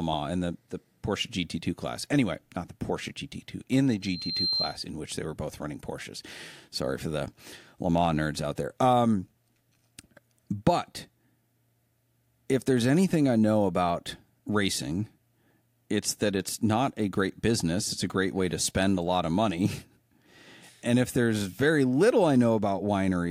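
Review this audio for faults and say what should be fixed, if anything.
A thin, piercing tone at 4.1 kHz swells over just under half a second until it is about as loud as the speech, from 4.02 to 4.84 s, between "in the" and "in which they were". This is loudspeaker feedback squeal: the microphone was picking up the loudspeaker it was feeding, and at 4.1 kHz the gain around that loop exceeded one, so the tone kept reinforcing itself until the loop was broken. To prevent it, keep the microphone out of the loudspeaker's coverage and lower the gain or notch the system near 4.1 kHz.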